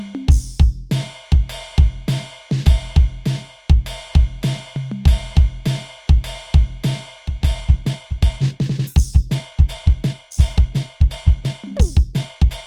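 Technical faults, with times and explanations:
7.58 s to 12.66 s, time-stretched section. The music abruptly plays 1.68 times faster, but its pitch stays the same. It sounds rushed until the end. Software likely squeezed this part to fit a length, dropping short slices to preserve pitch.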